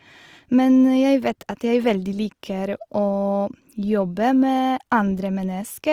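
Throughout the speech, grainy, rough, noisy texture replaces clean tonal detail, with full bandwidth retained; this points to Opus compression in music mode, likely around 24 kbps.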